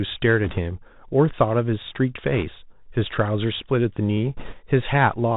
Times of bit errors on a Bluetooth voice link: 0.44-0.58, 2.33-2.43, 4.37-4.55

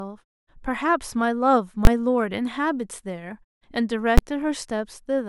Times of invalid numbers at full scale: 1.85, 4.18

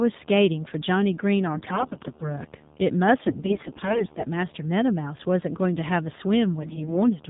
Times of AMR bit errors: 1.54-2.39, 3.28-4.24, 6.60-6.97

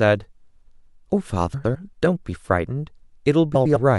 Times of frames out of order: 1.54-1.76, 3.55-3.77

